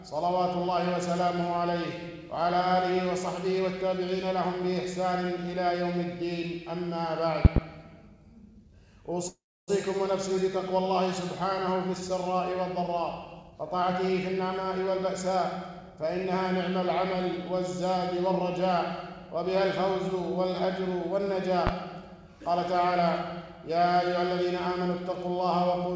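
At 7.45 to 7.60 s, a voltage step, likely from a plug, switch, static or driver glitch, lands on the signal as a loud pop heard as two sharp pops in quick succession, peaking about 25 dB above the sound, which carries on underneath.

From 9.28 to 9.70 s, a call audio freeze occurs, likely because packets stalled and the jitter buffer ran dry. The receiver stretched the last sound into a fading buzz or hiss, then about 0.28 s of silence, filling 0.4 s in all. Nothing is lost, but everything after arrives 0.4 s later.

From 13.43 to 15.36 s, the jitter buffer holds surplus audio and trims it by cutting out pitch-period-sized slices repeatedly. This jitter buffer speed-up plays the sound at 118% speed with unchanged pitch, removing roughly 0.4 s and making it sound rushed. A milder stretch follows at 15.81 to 16.33 s, at 108%, removing around 50 ms.

At 21.67 to 21.71 s, another loud pop, likely from a similar electrical transient, arrives as a single sharp pop about 20 dB above the sound. 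Throughout, the call path's codec leaves nothing above 8 kHz, which fits a wideband codec such as G.722.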